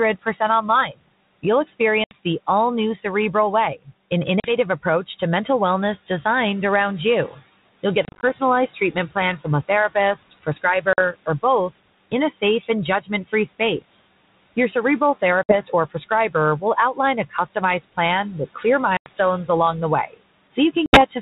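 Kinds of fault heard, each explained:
Noise suppressor artifacts: The noise suppressor mistakes the steady room noise, which sits about 19 dB below the speech, for something to remove. It lowers those bands by about 19 dB, frame by frame, throughout the clip. As a result, the background sinks away in the pauses and rises again under every phrase.
Speech cut by the noise suppressor: In six stretches the suppressor takes quiet parts of the speech for noise and turns them down along with the background. The drop ranges from about 10 dB to about 22 dB, and the deepest cut comes in the opening seconds just before "all new". Each stretch loses a few hundred milliseconds of speech in total. Soft consonants and word endings sound swallowed or faint.
Packet loss on an ADPCM call: Packets go missing and are replaced by silence, and the decoder's adaptive predictor and step size drift out of step with the sender's. 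This leaves seven hard-edged holes of 40 to 120 ms, at 2.04, 4.40 (just before "approach to mental wellness"), 8.05, 10.93, 15.43, 18.97 (just before "along the") and 20.86 s. The gap at 8.05 s is broken into short pieces spread over 180 ms. After each hole the speech comes back slightly distorted, then settles within some tens of milliseconds.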